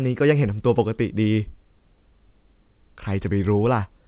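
Nothing is technically wrong with this speech clip, which comes through a WebRTC call path using G.711 A-law at 64 kbps, with nothing above 4 kHz.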